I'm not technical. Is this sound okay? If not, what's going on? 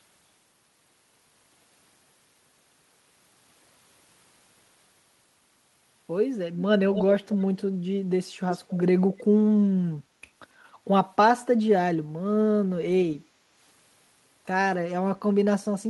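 No. Around 6.91 to 7.04, 7.28 to 7.62 and 8.51 to 8.75 seconds there's an echo leak: a faint, separate repeat of the speech about a quarter-second late, likely from a loudspeaker's sound slipping back into a call. A roomy blur would have no distinct repeat.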